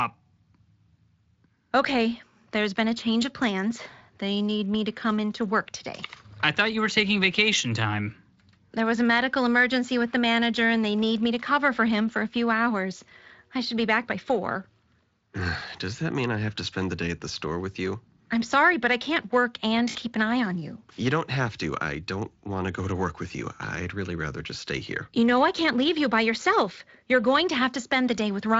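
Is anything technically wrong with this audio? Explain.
Yes. At 19.89 to 19.99 s, lost VoIP packets forced the Speex decoder to extrapolate its last pitch and filter, so about 60 ms of speech becomes a stretched, fading smear.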